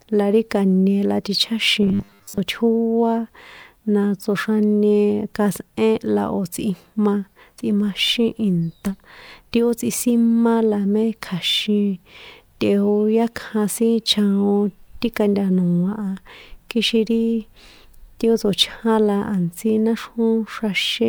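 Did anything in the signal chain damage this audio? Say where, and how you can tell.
Yes. From 1.83 to 2.40 s the speech collapses into a rigid, metallic buzz at a fixed 100 Hz that still roughly tracks the syllables, which is robotic sound from repeated short buffers, likely at the driver or buffer stage. A 100 Hz buzz means the same 10 ms chunk is replayed over and over while most of the real audio in that span is skipped. Codec artefacts would smear or warble the sound, but they would not lock it to a steady pitch.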